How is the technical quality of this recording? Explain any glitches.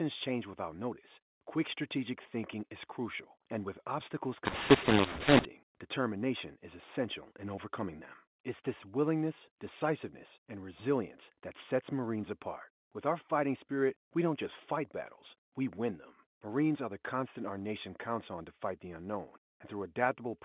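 The speech comes through a G.711 telephone channel, band-limited below 4 kHz, and carries one glitch. From 4.45 to 5.45 s, between "crucial and with obstacles" and "determination is essential in", the audio turns harsh and gritty with noise in the gaps: mu-law and A-law mixed up, mu-law samples decoded as A-law, scrambling levels.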